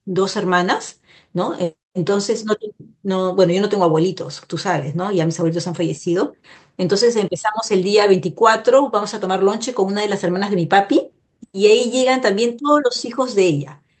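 There are no technical faults to describe in this speech, at any point in time.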